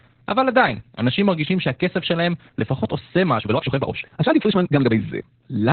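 Opus voice compression runs throughout: nothing survives above 4.3 kHz, and coarse SILK coding leaves speech muffled, hoarse and faintly robotic. That is narrowband codec damage, which fits about 8 kbps, rather than a simple low-pass filter.

From 3.36 to 4.98 s, the pace suddenly doubles while pitch holds, sounding rushed; this is likely a time-stretched section, not a sped-up tape with rising pitch.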